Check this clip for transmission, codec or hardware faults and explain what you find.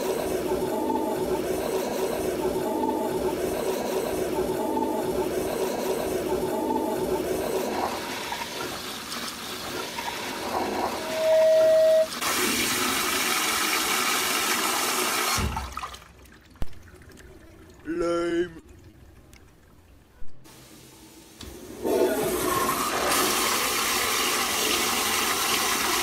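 Three faults stand out: a feedback squeal, then a brief hold and a run of stutters a few seconds later.

From 10.94 to 12.11 s a steady tone at 638 Hz swells up over the audio in under half a second and ends up about 5 dB above it. This is loudspeaker feedback squeal. A microphone was picking up the loudspeaker it was feeding, and at 638 Hz the loop gain rose above one, so that frequency kept reinforcing itself.

Between 17.47 and 17.51 s the sound hangs on for an extra 20 ms before carrying on from where it paused, with nothing lost. That is a short stall from a late packet. A packet arrived after it was due, the jitter buffer emptied, and the receiver extended the last bit of sound to cover the wait. Playback then resumed about 20 ms behind its earlier timing.

Over 17.93 to 18.95 s the audio drags and catches four times. The gaps add up to 80 ms of filled sound, the longest is 30 ms, and together they cover about 8% of that second. 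This is repeated stalls (stutter). Packets kept reaching the receiver late, so the jitter buffer ran dry again and again. Each time the last sound was held until data arrived, and none of the content was dropped.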